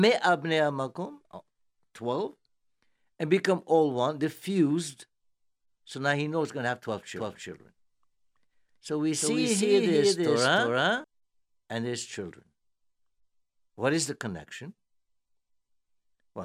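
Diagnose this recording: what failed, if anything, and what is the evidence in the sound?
A doubled audio track runs from 7.16 to 11.04 s: a second, equally loud full-band copy trails about 0.3 s behind, starting and stopping abruptly. The spectrogram shows every feature repeated at a fixed lag without decay, likely from a slower second capture path in the driver or routing stage.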